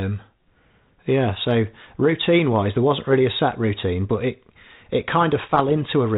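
From 5.48 to 5.76 s, bit errors on the ADPCM link corrupt a small share of the transmitted bits, roughly two in every thousand. Each flipped bit throws off the decoder's adaptive step size and prediction, so the damage rings on for several milliseconds instead of staying a single sample wide. The result is a short cluster of pops and rough, gritty bursts with brief jumps in level, cutting across the light, band-limited G.726 coding that fits a 32 kbit/s cordless-phone link.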